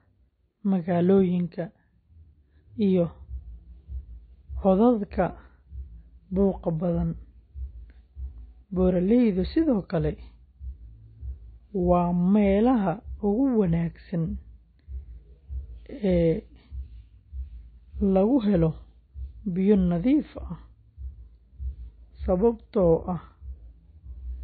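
Throughout this speech recording the sound is muffled and smeared, with nothing above 4.6 kHz. That is the signature of low-bitrate audio saved at a high bitrate: a very low-rate MP3, likely around 24 kbit/s, re-encoded at a high rate that cannot restore the removed detail.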